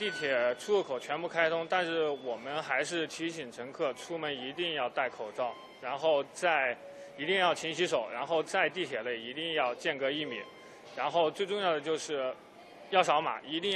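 No technical faults can be heard anywhere here.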